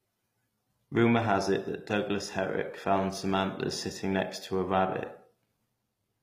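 All the way through, the speech has gritty, lispy, metallic sibilance and a treble that doesn't sit naturally over the lower band, which is plainly audible. That's likely HE-AAC compression at a low bitrate, something like 24 kbps, where the top end is rebuilt from copied lower bands rather than coded directly.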